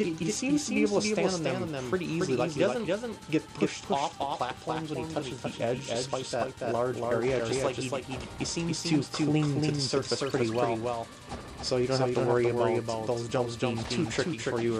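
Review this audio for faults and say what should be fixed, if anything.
A second copy of the same audio has likely been mixed in, either picked up again through a slower capture path or left behind by an edit that holds two versions out of step. The result is a doubled audio track across the whole clip: a full-band repeat trails the original by roughly a third of a second, about 5 dB quieter, with no decay or room colour, so every event is heard twice as a flat, distinct echo. To prevent it, route each source through one capture path only and check edits for duplicated, offset regions before mixing down.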